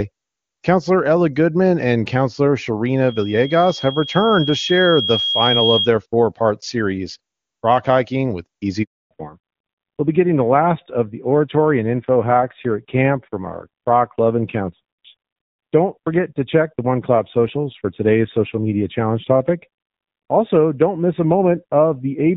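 A speech recording carried over a mobile call, opening on clean HD Voice with little audible coding damage, consistent with AMR-WB at its top rate of 23.85 kbit/s. From 3.08 s to 5.91 s a loudspeaker feedback squeal rises. A microphone is picking up the speaker it drives, and at 3.3 kHz the loop gain exceeds unity, so that single tone builds on itself over roughly two seconds until it is about as loud as the speech. It stops just before "four part series", where the loop is evidently broken or pulled down. At 8.83 s the audio cuts out for 280 ms, a handover gap: the call is being passed from one network link to another, no speech frames arrive during the switch, and the sound decays within a few tens of milliseconds into silence until the new link delivers audio again at 9.11 s. Whatever was said in that window is gone. From 9.11 s to the end the call shows a fallback to narrowband. The new link has dropped the wideband codec for an older narrowband one, so the band above 4 kHz is missing for the rest of the clip. 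Sibilants lose their edge, the voice turns dull and boxy, and there is a rougher, grainier texture that points to a low-rate coder, fitting AMR-NB at about 7.4 kbit/s.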